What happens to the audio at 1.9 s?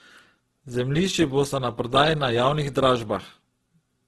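At 1.9 s, as throughout the clip, the speech is grainy and rough with nothing above 12.2 kHz, likely Opus compression at about 12 kbps filling starved bands with noise.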